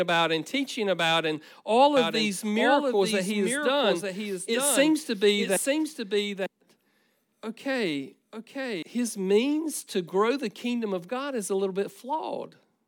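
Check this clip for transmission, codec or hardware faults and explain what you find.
One fault stands out: a doubled audio track from 1.97 to 8.83 s. The speech was likely picked up a second time through a slower path, so a dry, full-band copy trails roughly a second behind, a few dB quieter, starting and stopping abruptly.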